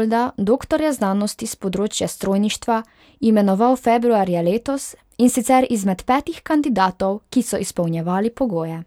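No technical faults are audible.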